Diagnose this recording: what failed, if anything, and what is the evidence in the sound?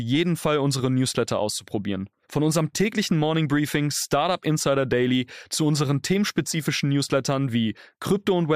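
Nothing failed; no fault can be heard anywhere.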